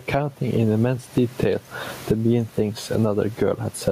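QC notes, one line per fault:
Throughout, gain pumping: with room noise about 35 dB below the speech, the gain ducks under every loud syllable, a swing of roughly 20 dB, squashing loud and soft parts. Likely cause is gain set far too high, with a fast limiter pulling it down.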